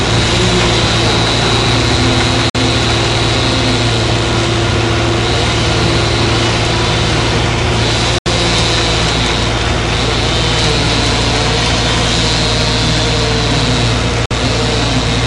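A digital broadcast dropout strikes three times, as the receiver stops getting decodable frames and mutes its output until clean data returns. At 2.50 s the sound fades out in about 3 ms and leaves a gap of roughly 48 ms, which fits two lost frames. At 8.18 s the silence lasts about 72 ms, consistent with three frames. At 14.26 s there is another 48 ms hole. Each time the audio simply resumes later, and whatever was transmitted during the gap is gone.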